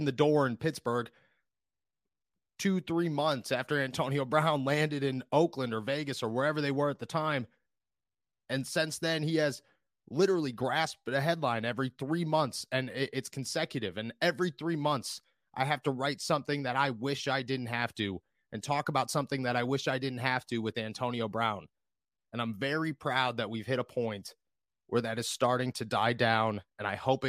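No technical faults can be heard anywhere in this speech recording; the signal stays steady and intact throughout.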